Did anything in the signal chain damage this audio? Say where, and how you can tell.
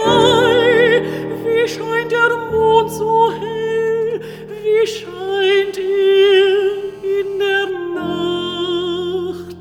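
Yes. GSM signalling bursts enter the analogue wiring at 3.87 to 5.45 s. Galloping ticks and brief 217 Hz buzzes, roughly 30 dB down, reveal rectified radio pulses.

GSM phone buzz follows at 5.51 to 7.70 s. A steady, raspy 217 Hz buzz, about 29 dB below the sound, shows a nearby call's bursts being rectified.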